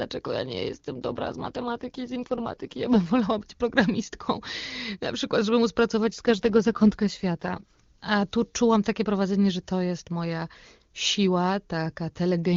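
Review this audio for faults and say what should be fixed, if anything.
An AMR rate drop happens twice, from 0.95 to 3.16 s and from 6.08 to 7.80 s. The sound points to the link forcing the wideband codec down from 23.85 to about 8.85 kbit/s to spend bits on error protection, so the speech turns rough and synthetic without losing band or leaving gaps, then clears when the rate returns. Improving radio coverage or link margin so the network has no reason to lower the codec rate would prevent these drops.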